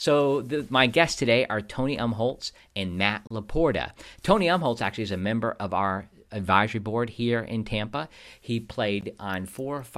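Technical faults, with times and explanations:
3.27 to 3.31 s and 9.01 s, gap at a join of encoded pieces: the speech drops out twice, for about 33 ms and then about 15 ms, and resumes where it stopped. The audio was likely encoded as separate pieces and joined untrimmed, so each seam keeps an encoder's leading delay and the previous piece's padded final frame. The codec smears the edges of each silence, so the fully silent part is shorter than the gap itself.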